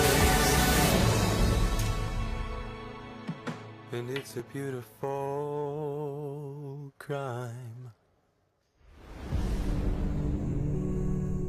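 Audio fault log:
2.08 s, 3.35 s, 4.40 s: dropped buffer (overrun). Each is a jump where the sound skips ahead with no gap. Around 20 ms goes missing at the first and about 10 ms at the others, likely because samples were overwritten before the program collected them.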